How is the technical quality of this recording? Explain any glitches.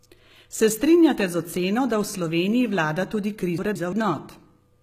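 The recording has clearly audible coding damage throughout and one jumbled moment near the end.

The whole clip has a gritty, metallic top end: sibilants sound smeared and lispy, and nothing is present above about 14.9 kHz. The likely cause is HE-AAC compression at a low rate, consistent with roughly 20 kbps. That codec stores only the lower spectrum properly and rebuilds the treble by copying lower bands upward under a coarse envelope, so the upper harmonics don't line up with the real ones below.

From 3.58 to 3.93 s, just after "vlada tudi", the speech briefly garbles, a case of chunks out of order. A block of about 171 ms was delivered one chunk late and plays after the block that should have followed it. No audio is missing, but the sequence is swapped, leaving three abrupt joins.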